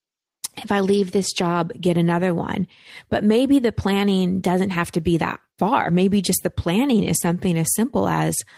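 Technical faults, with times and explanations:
7.17–7.27 s, lost packet rebuilt from error correction: Right after "just the planning is," the sound turns briefly rougher and noisier but never drops out. The lost audio was replaced by a low-bitrate copy carried in the following packet, and the decoder played that copy in its place. The roughly 60 ms of rebuilt audio fits three 20 ms packets. The waveform shows no gap, and on the spectrogram the energy runs on unbroken but looks grainier and smeared.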